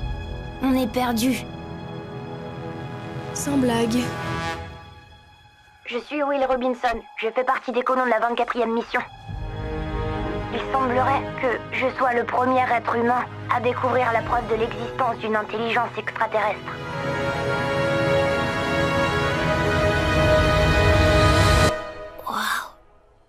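Nothing goes wrong anywhere in this recording, so there's no fault to point to at any moment.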